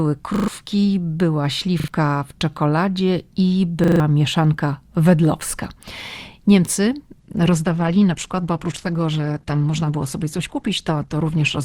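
Speech with two kinds of fault. A repeated buffer stutters the audio three times, at 0.36 to 0.48 s, 1.8 to 1.88 s and 3.84 to 4.0 s. Each time, a short fragment whose length fits a 40 ms buffer plays again and again with a hard join at each repeat, and roughly 0.1, 0.07 and 0.15 s of speech are lost in turn. Unlike a dropout, there is no silence: the stall is filled with the same slice of sound. From 7.2 s to the end, the adaptive stream switches to a lower bitrate. Treble above 12.2 kHz disappears and codec artefacts thicken, which points to a much lower bitrate being served after the connection slowed. The change is sudden, has no gap and never recovers, which sets it apart from packet-loss smearing or a gradual filter.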